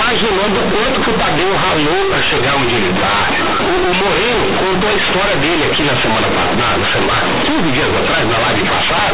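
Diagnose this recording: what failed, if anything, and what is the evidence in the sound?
A sample-format conversion failed: the A-law bytes from the G.711 telephone path were handed on as plain linear 8-bit samples, skipping the expansion step. That is companded audio read as linear. Every sign change now jumps across roughly half the output range, so soft and loud passages of the speech come out at similar, very high level, heavily buzzy and distorted, with loud noise filling the pauses from start to finish.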